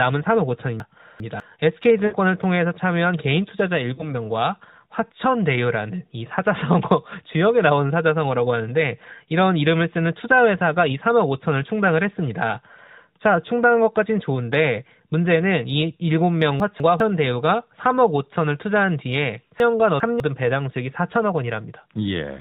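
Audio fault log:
0.8–1.4 s, 16.6–17.0 s and 19.6–20.2 s: chunks out of order. A 200 ms chunk plays after the chunks that should follow it, two chunks late in the first and last spots and one chunk late at 16.6 s. Nothing goes missing, unlike a dropout, but the speech briefly jumbles at the hard joins.
2.06–2.14 s and 3.94–4.09 s: lost AMR speech frames. Three frames (60 ms) and then two frames (40 ms) fail. The narrowband decoder stretches the last good pitch and vocal-tract settings at falling gain, so each is a short smeared dip or warble, not a silent gap or click.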